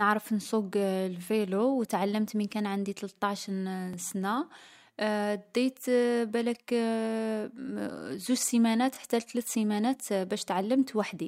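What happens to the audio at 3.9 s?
Overlapping chunks: the speech was handled in 5.0-second chunks, and the chunk starting here begins 20 ms before the previous one ended. That 20 ms stretch, from 3.93 to 3.95 s, plays twice, producing a brief click or stutter at the join.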